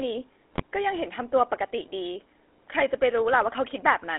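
Speech runs through the GSM full-rate codec for the whole clip. The regular-pulse excitation gives it a buzzy, gravelly texture, and the band sits at roughly 300 Hz to 3.5 kHz with nothing above. The damage is plainly audible and fits the 13 kbit/s full-rate coder. From 0.53 to 0.62 s, GSM bit errors break the sound into squawks and gargling. Corrupted filter, pitch and gain parameters distort the spectrum and level frame by frame. This points to around five damaged frames at an error rate of roughly 2 percent.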